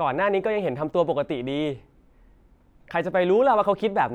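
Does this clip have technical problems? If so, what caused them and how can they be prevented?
No, this clip has no technical problems, so there is nothing to explain or prevent.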